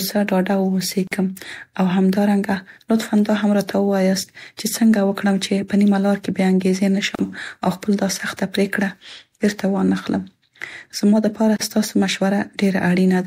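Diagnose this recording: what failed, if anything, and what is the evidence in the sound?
Codec-stage gap at a join of encoded pieces: roughly 40 ms silences at 1.07, 7.15 and 11.56 s, where untrimmed encoder delay and padding stayed in.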